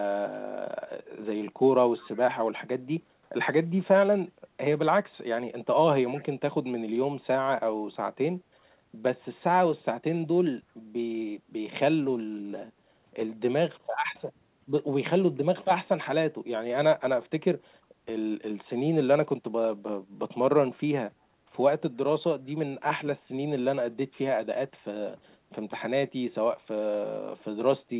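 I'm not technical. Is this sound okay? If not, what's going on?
No. At about 10.61 to 10.74 s, the background was gated by the echo canceller. On a call, this feature lowers your microphone while the other person's audio plays from the speaker, so that sound isn't sent back to them. Here it pulled the microphone down hard for a fraction of a second, so the room sound behind the speech briefly dips and then returns. The call line's normal narrow, phone-like tone, with nothing above 4 kHz, is not a fault.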